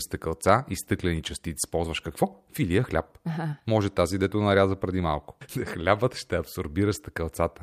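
Skip ahead at 1.63 to 1.65 s, right after "стъкълца и стъклени": a stretch of roughly 0.7 s of speech never reaches the listener. It was discarded either in transit or by an overflowing jitter buffer while later audio was already queued, and nothing fills the gap. The speech on either side is spliced almost edge to edge, so the talker seems to leap forward mid-phrase and the playback delay shortens by that same amount.

Jitter buffer speed-up from 1.77 to 3.68 s: the receiver's buffer is holding more audio than its target, so it trims tiny slices of one or a few pitch periods again and again to bring the delay down. Across this stretch about a fifth of a second is removed, and the speech runs at about 110% of normal speed. Pitch stays unchanged, but the talker sounds noticeably rushed until 3.68 s.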